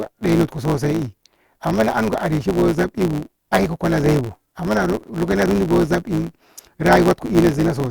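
From start to finish the speech carries a steady buzz at 109 Hz and runs 1.09 times fast while keeping roughly its normal pitch. This is a block size mismatch (truncated): each block arrives longer than the next stage reads, so its tail is discarded every cycle.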